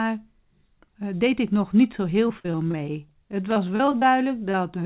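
From 2.28 to 3.12 s, just after "nog niet zo heel", repeated packet loss: nine gaps, the longest 48 ms, are bridged by extending the last sound, so the speech turns choppy with pieces missing. Between 3.44 and 3.91 s, a jitter buffer slow-down stretches the audio by 40 ms to about 93% speed, drawing it out at the same pitch. Overlapping it from 3.51 to 4.03 s, repeated packet loss returns with six gaps up to 35 ms long, bringing back the choppy texture with pieces missing. At 4.51–4.55 s, short concealed packet loss patches a 20 ms hole, leaving a brief smear. Throughout, the telephone-band codec path leaves nothing above 4 kHz.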